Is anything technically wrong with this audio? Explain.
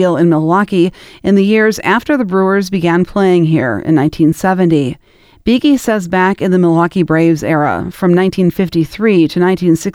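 No technical faults are present.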